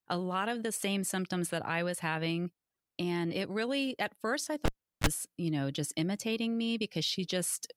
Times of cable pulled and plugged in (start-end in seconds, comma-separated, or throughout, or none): 4.65-5.07